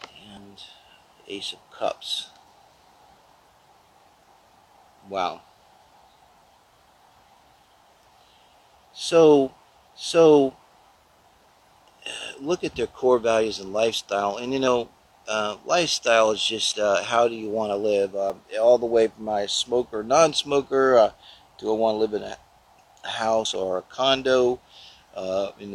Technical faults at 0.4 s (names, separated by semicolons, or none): dropped buffer (overrun)